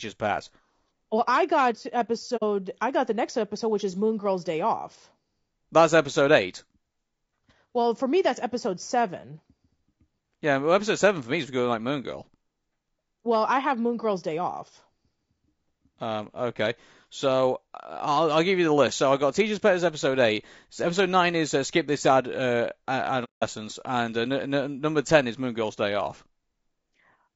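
Throughout the speech there is plainly audible coding damage: a rough, grainy texture, noise filling the gaps between harmonics, and a thin, synthetic-sounding top band. This is likely low-delay AAC compression (AAC-ELD), whose short frames resolve pitch poorly at a bitrate around 32 kbps.

AAC frame loss with muting occurs from 2.36 to 2.43 s, between "I got" and "I got the next", and again from 23.24 to 23.44 s. The decoder zeroed the missing spectrum, leaving soft-faded gaps, about 60 ms and 180 ms long, consistent with two and six lost frames.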